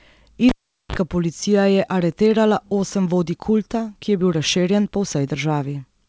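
At 0.49 s the speech cuts out with a sharp pop, the sound of a cable pulled and plugged in again. For about 420 ms the signal drops to near silence while the connection is broken. As the plug goes back in, only its tip makes contact at first. That brings a 41 ms burst of 50 Hz mains buzz. A second pop at 0.96 s restores the sound, just before "policija je aretirala osem". The call path's G.722 coding leaves nothing above 8 kHz.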